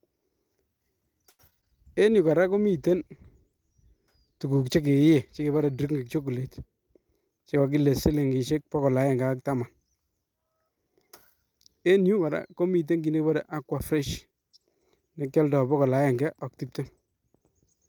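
From 1.29 to 1.64 s there is repeated packet loss with a robotic sound: four gaps in quick succession, the longest 96 ms. The receiver extends the previous sound across about 127 ms and leaves some 60 ms missing. With 37 percent of the stretch concealed, the speech turns choppy.

A call bitrate drop runs from 2.12 to 5.77 s. The sender's bandwidth estimate fell and the encoder went from 48 to 18 kbps, staying at the lower rate for about 3.6 s. The coarser Opus coding and reduced high-frequency content make the speech rougher and duller until the rate recovers.

Between 6.93 and 7.65 s a jitter buffer speed-up plays the speech at 112 percent of normal rate. The buffer had grown beyond its target, so the receiver cut short pitch-period segments, roughly a tenth of a second in all. The speech sounds hurried while its pitch stays unchanged.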